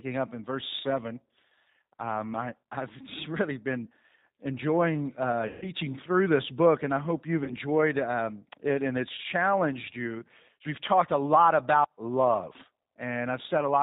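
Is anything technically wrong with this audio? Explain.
Yes. Two faults are audible.

The whole recording is coloured by the G.729 codec. This 8 kbit/s speech codec models each 10 ms frame as a vocal-tract filter driven by a pitch predictor and a few pulses. Nothing above 4 kHz survives, and the voice sounds plainly rough and synthetic. That distinguishes it from simple low-pass filtering, which would sound muffled but natural. It also differs from music-codec artefacts, which swirl and chirp rather than buzz.

VoIP packet loss concealed by the speech codec occurs twice. The first runs from 5.47 to 5.72 s, right after "really been enjoying uh" and before "through this book and". It fits roughly 150 ms of missing audio. The second is shorter, from 7.44 to 7.52 s, between "and I hope you've" and "um it and it's". It fits about 30 ms lost. In both, the decoder keeps extrapolating its last pitch and filter at a falling gain, so the sound smears into a fading buzzy tone or coloured noise. 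A plain dropout would leave silence or a click instead. Because each frame builds on the previous one, the voice stays weak or distorted for a moment after the gap.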